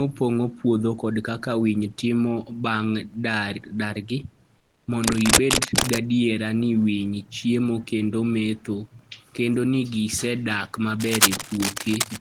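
A speech clip with two kinds of fault. From 4.58 to 4.87 s, about 290 ms, comfort noise in place of the background takes over. The room background, which sits about 39 dB below the loud parts, is replaced by a flat, featureless hiss about 9 dB quieter. The likely cause is discontinuous transmission, as in Opus DTX. The sender goes quiet when it detects no speech, and the receiver invents smooth noise to fill the gap. Cable scratch noise appears twice. From 5.04 to 5.98 s, dense, ragged bursts of rustling sit somewhat louder than the speech. From 11.00 to 12.17 s, just after "metho kendo ni gisedak", similar scratching runs at roughly the same level as the speech. Both bursts likely come from a worn cable or connector being moved. Its contact resistance jumps about and injects uneven noise into the signal.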